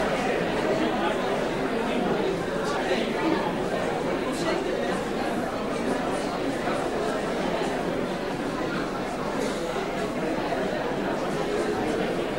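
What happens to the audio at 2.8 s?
At 2.76 s, compressed frames are skipped: several whole frames, about 150 ms of audio, never play. The sound leaps ahead rather than leaving a silent gap.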